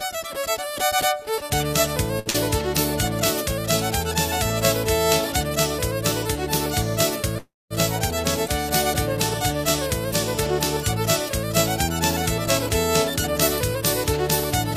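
At 2.19 s there is a short stall from a late packet, lasting until 2.29 s. The next packet had not arrived when the receiver needed it, so the jitter buffer ran dry and the receiver stretched the last bit of audio for about 64 ms while it waited. Playback then resumed from the same point, so nothing is lost, but the sound is held slightly too long. This also adds about 64 ms to the playout delay.

Immediately after, from 2.30 to 2.37 s, comes a short concealed packet loss. About 40 ms of audio never reached the decoder in time, and the receiver bridged the hole with roughly 41 ms of synthesized continuation before crossfading back into the real signal. This follows straight on from the stall and sounds like a brief smear or wobble. The content of that 40 ms is actually gone, not just delayed.

From 7.38 to 7.74 s there is a call audio freeze. The audio first continues as a fading buzz or hiss, then drops to near silence for about 220 ms, and picks up again exactly where it stopped. 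In total about 326 ms is inserted with nothing missing. The likely cause is packets held up in transit, leaving the jitter buffer empty, and the freeze adds about 326 ms to the delay.

Between 13.73 and 14.24 s there is a jitter buffer speed-up. The buffer held more audio than its target, so the receiver trimmed it down by cutting out many short pitch-period-length slices in succession, removing about 40 ms in total. For that half second the sound runs about 6% faster at unchanged pitch, giving a slightly hurried, compressed feel.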